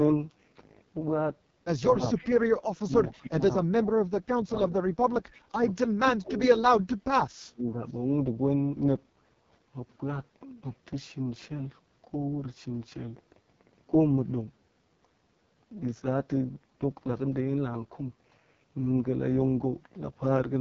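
Throughout, the speech carries the rough, raspy texture of the AMR wideband (HD Voice) codec running at heavy damage, which fits its lowest 6.6 kbit/s mode. On a spectrogram, energy stops at about 7.4 kHz. The band above 6.4 kHz looks like smeared noise rather than harmonic detail.

At 2.17 to 2.28 s, 3.09 to 3.29 s and 5.33 to 5.40 s, faint scraps of echo leak trail the voice by 266 ms, sitting some 25 to 30 dB down. This is likely an echo canceller on a loudspeaker phone letting residue through. They appear as weak ghost copies of earlier spectrogram patterns.

From 5.40 to 5.52 s, just after the last echo scrap, the background is gated by the echo canceller. The room sound dips by about 9 dB for roughly a tenth of a second and then returns. The waveform shows a brief notch in the noise floor.

Between 5.84 and 6.96 s, and again between 7.48 and 7.81 s, the talker's voice is speech suppressed in double talk. 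It sinks by as much as 25 to 30 dB, likely because the canceller clamped down while both sides spoke. The waveform collapses, and the spectrogram goes pale.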